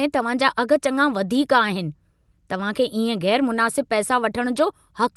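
No technical faults occur at any point in this speech, which comes through an Opus call link whose audio band reaches up to 12 kHz.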